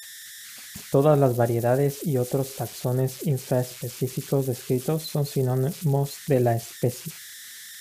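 Throughout the speech, converter idle tones appear: an undithered delta-sigma stage settles into repeating patterns, leaving a whistle around 2 kHz, about 17 dB below the signal.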